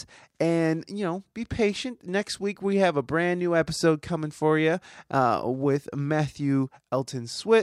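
No technical faults can be heard anywhere in the recording.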